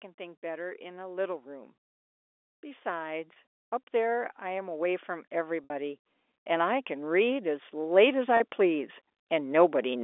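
The clip is telephone-band speech, and it has two faults. Automatic gain rising appears twice. From 0.16 to 1.81 s the level climbs by about 4 dB. From 3.91 to 9.99 s it climbs again by about 13 dB. The gain control judged the input too quiet and turned itself up slowly. Voice and background noise therefore swell together. Packet loss with pitch repetition occurs at 3.33 s, 5.64 s and 8.37 s. The gaps at 3.33 and 8.37 s each last 30 ms, which fits a single lost packet. These sound like a brief, slightly held buzz. The gap at 5.64 s lasts 60 ms, which points to two packets. Here the repeated pitch period fades toward silence, and the speech then cross-fades back in. In each case the receiver filled the hole by repeating the last pitch cycle. The sound sits in the 300 Hz to 3.5 kHz line band, as expected for G.711 coding.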